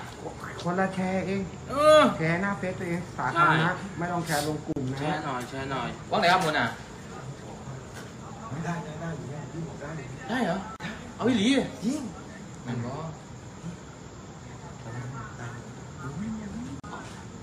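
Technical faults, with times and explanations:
4.73, 10.76 and 16.80 s: gap at a join of encoded pieces. Silences of about 37 ms recur every 6.0 s where separately encoded pieces were joined without trimming each encoder's start delay and padded last frame. Unlike a dropout, the sound resumes exactly where it stopped.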